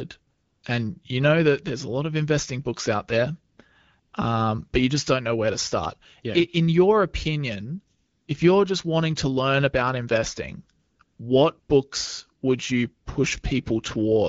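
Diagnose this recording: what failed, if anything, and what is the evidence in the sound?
AMR comfort noise, from the codec's discontinuous transmission: speech frames stop and steady synthetic noise replaces the real background at 0.33–0.63 s (before "and you know that"), 3.53–3.57, 3.99–4.13, 7.97–8.27 s (after "your opinion"), 10.79–10.99, 11.03–11.19 and 11.59–11.69 s. On a spectrogram these show as smooth, featureless blocks with abrupt edges.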